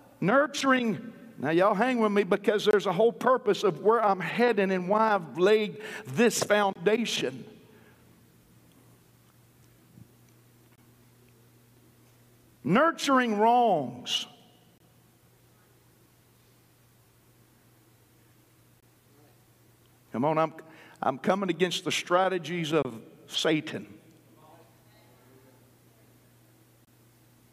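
Short, hard-edged holes of about 23 ms cut into the sound at 2.71, 6.73, 10.76, 14.78, 18.80, 22.83 and 26.85 s. This is a gap between chunks: the audio arrives in 4.0 s pieces, and silence is inserted at each join without losing any sound.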